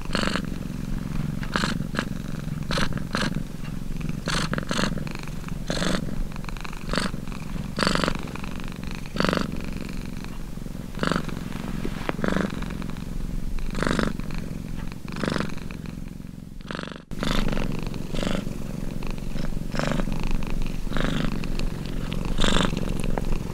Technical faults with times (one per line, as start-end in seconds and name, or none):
none